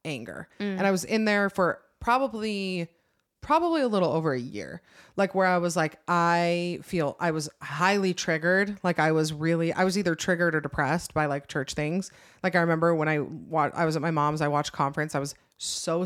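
No technical faults can be heard anywhere in the recording.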